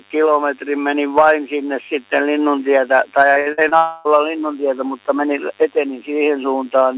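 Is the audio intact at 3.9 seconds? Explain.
No. At 3.9 s the audio sits inside a gap from 3.77 to 4.07 s. This is most likely a long network dropout. About 0.28 s of audio never arrived. The receiver stretched the last sound into a fading buzzy hiss. When the audio returns, that stretch is simply missing.

A DECT cordless phone buzz also runs under this moment. A nearby DECT device bursts every 10 ms, and the circuit rectifies those bursts. This gives a thin, steady 100 Hz buzz with many harmonics, roughly 35 dB below the main sound.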